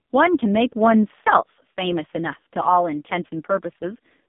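Throughout, the speech carries AMR narrowband mobile codec damage: nothing above about 3.7 kHz or below 150 Hz survives, and heavy coding that fits a low AMR-NB mode near 5 kbps leaves it buzzy and synthetic. A spectrogram shows a hard ceiling at 3.7 kHz and smeared formants.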